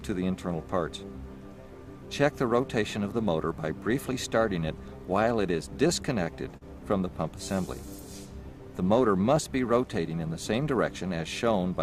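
Repeated stalls (stutter) run from 5.29 to 6.63 s: packets arrived late, so the buffer ran dry eight times, each gap bridged by continuing the last sound, the longest 44 ms, making the audio drag. A jitter buffer speed-up follows at 9.98 to 10.30 s, where about 40 ms was trimmed in small pitch-period pieces, so the sound runs hurried at 110% speed.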